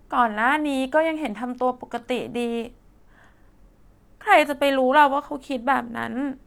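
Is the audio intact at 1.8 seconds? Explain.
Yes, at 1.8 seconds the speech runs cleanly, with no dropout, click, distortion or other fault to be heard at that moment.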